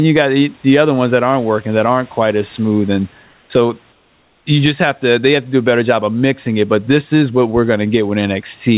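From 3.92 to 4.46 s, just before "you just have to", the room background turns into a flat, featureless hiss about 4 dB quieter. This is likely comfort noise in place of the background: transmission paused during silence and the receiver filled the 540 ms gap with synthetic noise.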